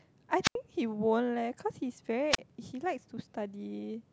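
At 0.43 to 0.55 s and 2.31 to 2.38 s, wireless microphone squelch dropouts occur: the FM signal fades, hiss rises, then the receiver mutes for 80 ms and 34 ms.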